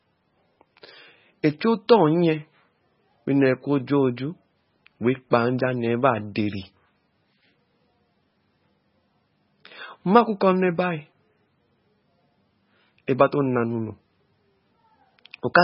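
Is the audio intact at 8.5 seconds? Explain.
No. At 8.5 seconds the speech carries MP3 compression damage, as it does across the whole clip. Nothing sounds above 5.6 kHz. The damage is heavy, which fits a very low bitrate near 16 kbps. The likely cause is an encoder starved of bits. It cuts the treble and drops weak frequency lines, which flicker from frame to frame. The result is watery, swirling speech with blurred onsets.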